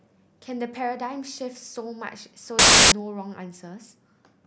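From 2.59 to 2.92 s the speech gives way to loud, harsh broadband noise from samples built from the wrong bytes: the byte order or alignment slipped, so each sample's noisy low bits became its large part.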